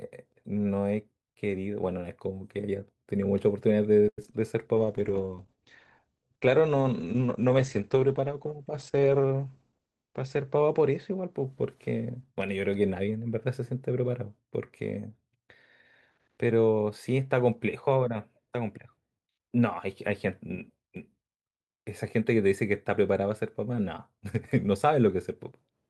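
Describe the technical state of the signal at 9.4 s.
At 9.4 s the signal is under a call bitrate drop, running from 4.75 to 13.79 s. The encoder fell from 64 to 13 kbps, with the lowest rate held for about 5.6 s. Bandwidth shrinks from 20 kHz to 8 kHz. The sound turns muffled and coarse.

A jitter buffer speed-up overlaps it, from 9.30 to 10.11 s. The receiver trimmed short pitch-period slices to drain excess buffered audio, roughly a tenth of a second in total. Playback runs at 110 percent speed with unchanged pitch. The speech sounds hurried.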